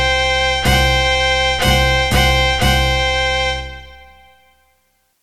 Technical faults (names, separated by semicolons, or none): none